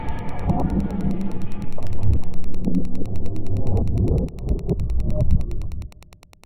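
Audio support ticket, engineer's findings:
Wi-Fi interference, throughout the clip. Faint steady ticking, roughly ten per second, about 40 dB below the signal. Nearby Wi-Fi radio's beacon, every 102.4 ms, picked up and rectified by the audio circuit, each transmission becoming a click. Probable component: unshielded input stage or cabling near the radio.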